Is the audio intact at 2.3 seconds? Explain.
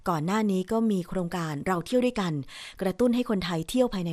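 No. At 2.3 seconds the speech carries MP2 compression damage, which runs through the whole clip. Starved of bits, the encoder shuts off upper sub-bands and coarsely quantises the rest. The sound is dull, gurgling and granular, most likely from encoding at about 80 kbps.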